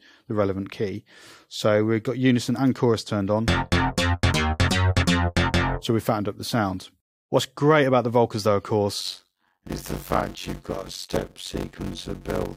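From 9.00 s to the end at 12.57 s, a block size mismatch (padded) sets in: one stage writes blocks shorter than the next stage reads, which fits 256-sample blocks read as roughly 480-sample ones, with zeros filling each remainder. The audio gains a buzz at 91.9 Hz and runs at 0.533 times normal speed, at about its usual pitch.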